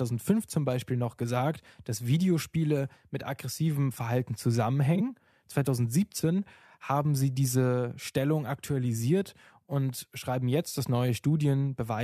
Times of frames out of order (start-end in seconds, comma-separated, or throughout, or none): 4.95-5.01